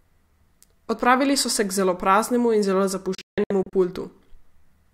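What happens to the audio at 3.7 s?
At 3.7 s the speech is coming back from a digital broadcast dropout that runs from 3.15 to 3.73 s. Over that stretch, 320 ms of sound is muted in several short holes, the longest 160 ms, which fits a receiver discarding about ten failed frames and muting until clean ones return. Each gap opens and closes with a 3 ms fade, so the cuts are near-instant silences with nothing in them, unlike the hiss of analogue fading or the smeared, repeated fragments of packet-loss concealment.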